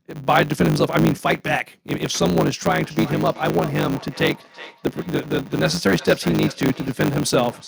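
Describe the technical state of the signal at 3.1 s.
At 3.1 s the signal carries a block size mismatch (truncated), present throughout. One stage writes longer blocks than the next reads, which fits a 512-sample write, and each block's tail is discarded. That leaves a 100 Hz buzz and speech running 1.16 times fast at about normal pitch.

A feedback echo between two devices also runs from 2.83 s to the end. A second device replays what this microphone sent, and that microphone picks it up again. This brings each phrase back roughly every 0.4 s, thin and ringing, at about 19 dB below the speech.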